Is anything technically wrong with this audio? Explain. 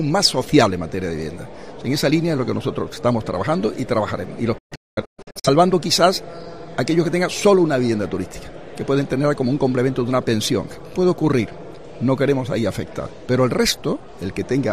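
Yes. From 4.58 to 5.49 s, a digital broadcast dropout: the receiver muted on corrupted frames, leaving several quickly faded silent holes, the longest 213 ms, with that audio lost.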